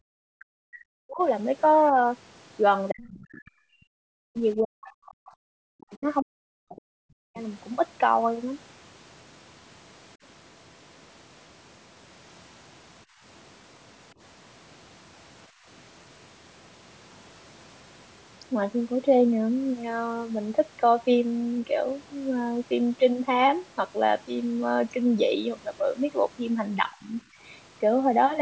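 A speech clip from a call, with the usual band limit and nothing above 8 kHz, shows three kinds of fault. The first is speech suppressed in double talk. The talker's voice drops away at 0.08 to 1.21 s, 2.9 to 3.73 s and 4.08 to 7.39 s. Each dip goes down by roughly 40 dB, and the longest lasts about three seconds. A shorter, shallower dip of roughly 15 dB follows at 26.9 to 27.09 s. The likely cause is both sides talking at once. The echo canceller could not tell the talker from the far-end echo, so it pulled everything down.

The other side's voice also leaks through, at 3.02 to 3.5 s and 4.85 to 5.11 s. These are brief scraps of a second voice, about 25 dB below the talker. They likely come from the loudspeaker feeding back into the microphone. The canceller removed most of that echo but not all of it.

Last, the background is gated by the echo canceller. The room sound ducks for about 150 ms at 13.05 s, by about 19 dB. 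It ducks again at 15.49 s, by about 17 dB. In both cases the canceller clamped the microphone while the loudspeaker played. The room tone comes back once it releases.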